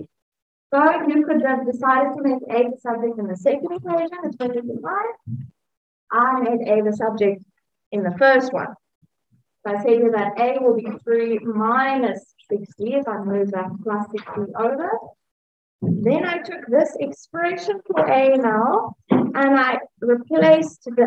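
From 3.76 to 5.84 s the audio runs 6% fast and rises about a semitone (101 cents), then snaps back; from 10.78 to 11.44 s it runs 6% slow and drops 107 cents. Both are likely drift correction steps in clock-matching playback.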